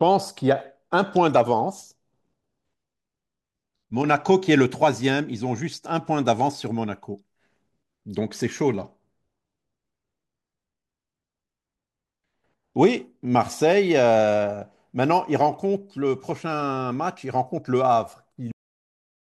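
At 18.52 s the speech just stops dead: a cut-off end, where the final buffers never made it out, so the sound is chopped mid-stream and drops straight into digital silence with no natural decay, staying silent right through to the finish.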